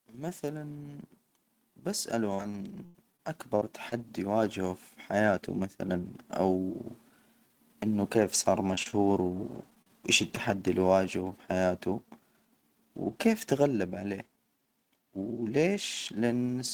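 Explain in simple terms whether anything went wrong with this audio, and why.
Between 2.34 and 3.92 s there is repeated packet loss. Six chunks of the speech stream went missing in quick succession, some as long as 88 ms. Each hole was filled by stretching the previous sound, so the speech turns choppy, with pieces missing, just before "يواجهه في حياته مثلا".

From 8.17 to 10.37 s there are scattered short gaps. About ten small pieces of audio were lost one at a time, none much longer than 40 ms, and each was quietly patched over. The speech stays clear but carries brief ticks and hiccups leading into "اللي واجهه بحياته".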